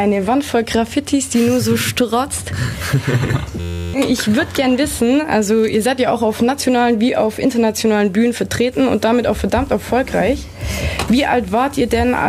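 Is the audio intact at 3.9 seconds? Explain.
No. At 3.9 seconds the sound is caught in a system hang loop that runs from 3.60 to 3.94 s. The computer or its audio driver stalled, and the hardware kept replaying the same small stretch of its ring buffer. That stretch is 11.61 ms long, which fits a 512-sample buffer, and it repeats 29 times. At 86.1 repeats per second, it becomes a steady buzz. About a third of a second of real audio is lost.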